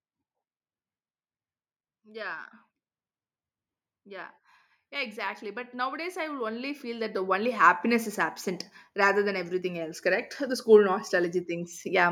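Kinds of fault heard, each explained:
Automatic gain rising: The level control judged the input too quiet and kept turning its gain up. It did not jump. It climbed steadily from about 4.03 s to 7.83 s, adding about 15 dB over nearly four seconds. The speech and the room noise behind it swell together, so the background grows along with the voice. The rise has finished just before "is absent rather than", which is heard at the new, louder level.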